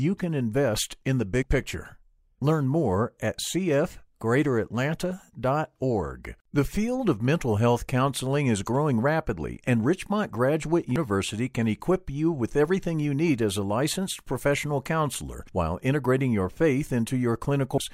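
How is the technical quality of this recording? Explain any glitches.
The recording has three brief glitches, all from damaged data in a compressed stream: at 1.42 s, right after "can invest in the"; at 10.96 s, just before "can equip you with"; and from 17.78 to 17.81 s. Corrupted bytes in the encoded file make the decoder misread those frames, lose sync and search for the next valid frame header. Each spot comes out as a short chirp or blip, and the last one lasts longer.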